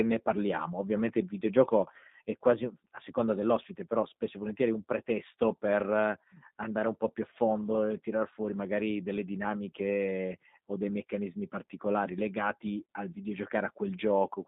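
From start to end the speech runs through a G.729 codec (the G.729A variant), its coarse texture consistent with 8 kbit/s. Each 10 ms frame is rebuilt from a vocal tract filter, a pitch predictor and four pulses in each half frame within a 150 Hz to 3.7 kHz band, leaving speech thin, plainly rough and synthetic.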